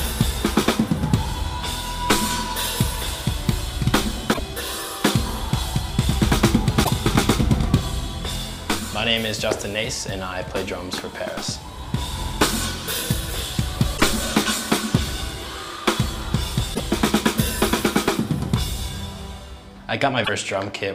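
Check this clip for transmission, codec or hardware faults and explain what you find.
Five short glitches break through the sound at 4.30–4.39, 6.81–6.90, 13.94–14.01, 16.71–16.80 and 20.21–20.29 s, each under a tenth of a second. They come from damaged data in the compressed stream. Corrupted bytes make the decoder misread frames, lose sync and skip ahead to the next valid frame.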